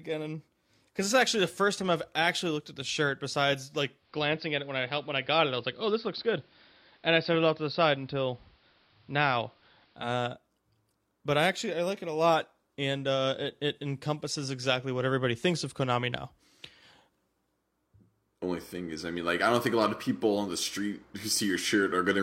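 Speech, with digital radio blending to analogue from 3.94 to 10.12 s: a 197 ms cross-fade to AM adds hiss well below the speech and shifts level by about 1 dB.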